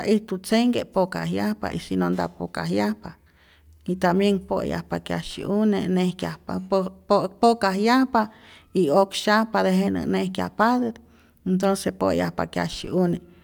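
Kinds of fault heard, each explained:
No technical faults can be heard in this speech recording. There is nothing to list for it.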